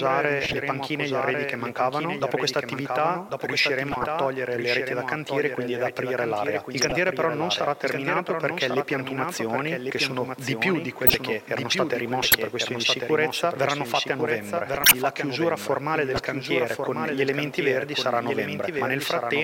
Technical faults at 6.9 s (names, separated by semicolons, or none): doubled audio track; corrupt frame decoded